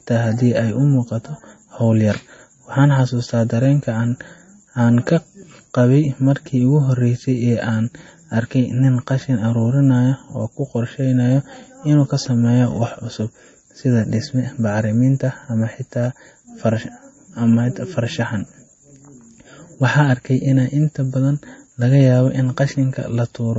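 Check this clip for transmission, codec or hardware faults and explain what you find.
One fault runs through the whole recording: MP3 compression. From start to finish the speech has a watery, swirling quality, with the treble gone above about 7.9 kHz and sibilants sounding thin and metallic. The cause is likely an MP3 encoder starved of bits, as at a low rate near 32 kbps. The codec chops off the top band at a fixed cut-off and drops weak frequency lines that flicker in and out between frames, leaving that unstable, swirly texture.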